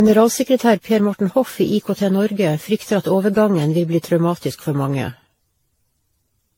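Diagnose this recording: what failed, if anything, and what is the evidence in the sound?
Swirly, smeared and hollow speech throughout, with blurred consonant attacks and nothing above 16.6 kHz. That's likely generation loss at the codec stage: about seven lossy passes, consistent with 64 kbit/s AAC-LC, each requantising on a shifted frame grid so the artefacts pile up.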